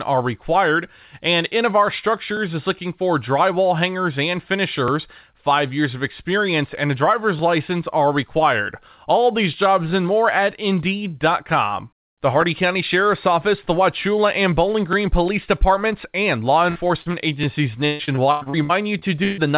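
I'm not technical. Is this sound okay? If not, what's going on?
No. Two separate problems can be heard in this speech, which comes through a call connection that gives it the slightly muffled, phone-like tone of audio with nothing above 4 kHz.

The first is overlapping chunks. At 2.37, 4.88, 7.39, 9.91, 12.42, 14.93 and 17.44 seconds there is a tiny click or stutter. Examples are just before "is looking for drywall", just after "for drywall hangers and", and between "these jobs" and "and more at". The sound was handled in pieces about 2.5 seconds long, and each new piece started slightly early, so about 12 milliseconds plays twice at every join. What marks this fault is its clockwork regularity and that nothing is lost. A sliver is merely repeated.

The second is repeated packet loss (robotic sound), from 16.7 to 17.15 seconds and again from 17.86 to 19.4 seconds. Here bits of the sound never arrived, over and over. 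Each gap was covered by stretching out the sound just before it, which gives a choppy, robot-like quality. In the longer stretch about a third of the sound is patched over, and the biggest hole is about 0.14 seconds. Unlike the clicks, this fault actually loses pieces of the speech.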